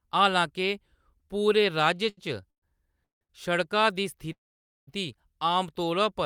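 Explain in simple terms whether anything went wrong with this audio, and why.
Packets arriving late twice left the receiver with nothing to play, causing a short stall from a late packet. It held the last bit of speech slightly too long, about 80 ms at 2.09 s and 60 ms at 3.23 s, before carrying on with nothing lost.

A call audio freeze happens three times, likely because packets were held up in the network. The speech stretches into a brief buzz, then goes quiet, at 2.50 to 2.64 s, 3.04 to 3.23 s, and a longer half-second gap from 4.32 to 4.89 s. Afterwards it resumes where it stopped.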